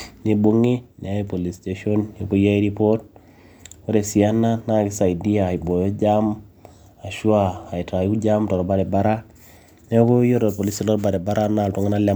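No technical faults can be heard anywhere in the recording.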